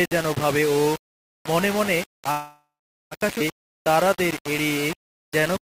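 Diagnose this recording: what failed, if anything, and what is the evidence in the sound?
Low bit depth without dither runs through the whole clip. A coarse, grainy distortion tracks the sound, sitting only about 10 dB below it and swelling and shrinking with the level, so quiet passages turn gritty rather than clean. That correlated error points to a sample-format conversion stage that likely rounded the signal to roughly 4 bits with no dither to break up the error and turn it into steady noise.

A call audio freeze runs from 2.31 to 3.14 s. The sound stops moving forward and the last fragment is stretched into a fading tone, which then gives way to roughly 390 ms of silence. When playback resumes it picks up where it halted, so about 0.8 s of delay is inserted and nothing is lost. That is consistent with a network stall that likely emptied the jitter buffer while the receiver concealed the gap.

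A skip ahead occurs at 3.39 to 3.43 s. Playback jumps forward with almost no join, only a few milliseconds of fill, and about half a second of audio is missing. The two sides butt together abruptly. At the network and buffer stage, a stretch of audio was dropped while later audio was already waiting, cutting latency by roughly the same half second.

A jitter buffer slow-down runs from 3.66 to 4.43 s. The sound plays at 94% speed with unchanged pitch, drawn out by 51 ms in total. In the buffer stage the receiver duplicated single pitch periods or bits of pauses in quick succession to rebuild its reserve.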